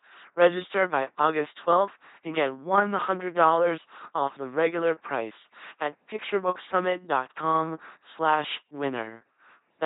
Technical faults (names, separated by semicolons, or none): LPC-10 vocoder